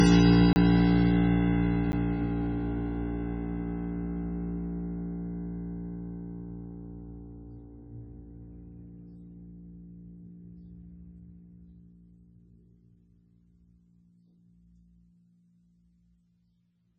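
Heavy MP3 compression is the likely cause of the starved, watery sound throughout this music; nothing survives above 9.1 kHz, which points to a very low bitrate of around 16 kbps. A block of digital silence, where samples were zeroed and replaced by nothing, cuts in hard from 0.53 to 0.56 s, a 30 ms hole, and again at 1.92 s as a 10 ms tick.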